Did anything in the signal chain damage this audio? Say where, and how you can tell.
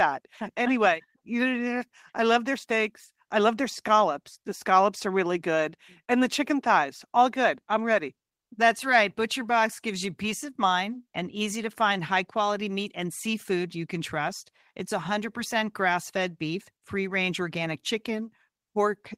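No, nothing in this recording points to signal-chain damage.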